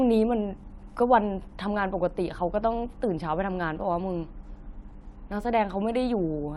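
From 4.15 to 5.65 s the speech shows imaging from linear upsampling. The rate was doubled by straight-line interpolation, which fits a 24 kHz to 48 kHz conversion. The top end dulls, and a faint mirrored band between 12 and 24 kHz, about 45 dB down, adds a slight metallic shimmer to sibilants. On a spectrogram it appears as a pale reflected copy above 12 kHz.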